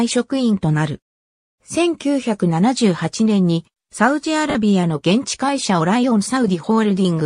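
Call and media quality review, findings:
Lost LE Audio frames at 4.50–4.55 s: about 50 ms gap filled with a brief noisy smear. Probable component: LC3 decoder concealment, repeating the last spectrum with randomised signs. Duration fits five 10 ms frames dropped on the Bluetooth LE Audio link.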